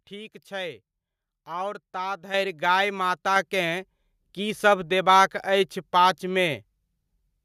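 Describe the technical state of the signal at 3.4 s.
Right around there, at 3.36 s, you get a microphone volume step-up: the call software decided the mic was too quiet and bumped the input gain in a single jump of about 3 dB, so the speech and the background noise both get louder at once.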